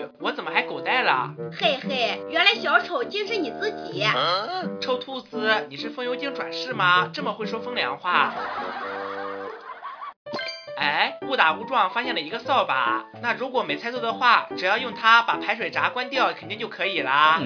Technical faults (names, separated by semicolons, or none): none